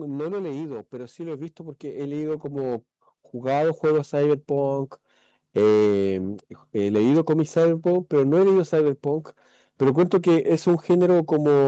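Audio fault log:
Throughout, hard clipping: every louder stretch of speech carries a harsh, buzzy fuzz with crackle on the peaks. The signal was driven about 9 dB past what a stage could pass, so a small but steady share of samples were sliced flat, adding high harmonics.
0.05 to 0.92 s, automatic gain falling: the speech starts loud, then sinks together with its background by about 4 dB over under a second. The automatic gain control judged the input too hot and eased its gain down gradually rather than at once.
0.9 to 4.87 s, automatic gain rising: voice and background swell together by about 14 dB over nearly four seconds. The automatic gain control found the level too quiet and climbed back up slowly, so the noise floor rises with the speech.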